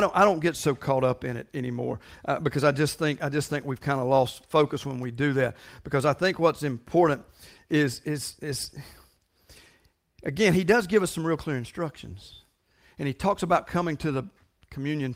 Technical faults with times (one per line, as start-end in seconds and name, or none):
none